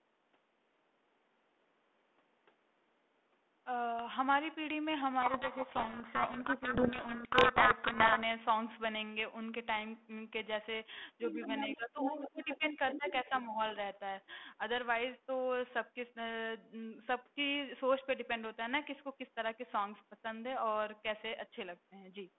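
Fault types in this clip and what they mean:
Codec payload misread, 5.22 to 8.23 s: the G.726 code words are read with their bit order swapped, so each sample's difference value lands wrong and the speech sinks under harsh, grinding distortion for those three seconds before decoding returns to normal.
Other side's voice leaking through, 11.21 to 11.76 s, 11.99 to 12.72 s and 12.91 to 13.12 s: a second voice appears, around 5 dB below the talker at first and about as loud at its peak, likely loudspeaker echo the echo canceller failed to remove.
Speech suppressed in double talk, 11.33 to 11.40 s, 11.68 to 11.98 s, 12.16 to 13.05 s and 13.24 to 13.57 s: the talker's level dips while the far side plays on the loudspeaker, by around 5 dB at the mildest and about 20 dB at worst, likely the canceller turning everything down when both sides overlapped.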